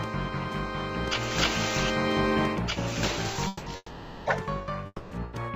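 Call audio freezes at 3.47, 3.76 and 4.86 s hold the last sound as a fading buzz or hiss for 0.19, 0.5 and 0.25 s, likely from delayed packets draining the jitter buffer. Unlike packet loss, nothing is cut out; the audio resumes where it stopped, only later.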